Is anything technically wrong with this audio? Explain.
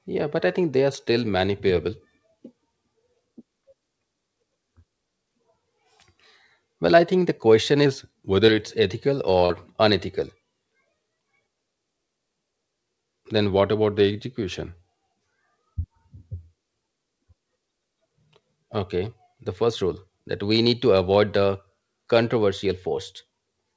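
Yes, the speech has two kinds of fault, heard through a call path whose band stops at 8 kHz, which fits the G.722 wideband codec.

Drift correction steps, at 7.86–8.63 s, 13.50–14.80 s and 22.88–23.50 s: the sound suddenly slows by 6.11% and drops about 109 cents for the first two, then speeds up 6.11% and rises about 103 cents for the last, before snapping back. That semitone-sized detuning is likely a clock-matching rate step refilling or draining a buffer.

Short concealed packet losses, at 8.46–8.50 s and 9.46–9.52 s: about 20 ms and then 40 ms of audio never arrived in time. The receiver covered each gap by extending the preceding sound and blending it back into the real signal, which leaves a brief smear or wobble. The first loss falls inside the first pitch drop.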